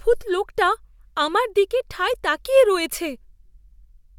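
Speech recording with no audible technical faults anywhere.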